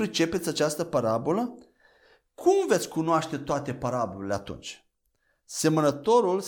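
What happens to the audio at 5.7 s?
Nothing goes wrong at 5.7 s; the speech continues there without any audible fault.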